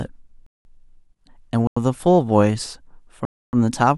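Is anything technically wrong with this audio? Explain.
Yes. This speech clip has three blocks of digital silence, at 0.46 to 0.65 s, 1.67 to 1.77 s, and 3.25 to 3.53 s. They last about 186 ms, 93 ms and 279 ms. The first two lengths fit whole buffers of 8192 and 4096 samples. In each case a block of samples arrived as zeros, so the audio drops abruptly to dead silence and returns with no fade. Each is heard as a short hole in the speech.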